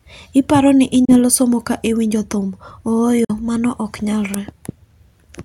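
Speech with two brief Bluetooth dropouts, where the sound cuts to silence at 1.05 to 1.16 s and 3.24 to 3.31 s, then resumes further along as if it had kept playing. The likely cause is audio packets reaching the headphones too late and being discarded.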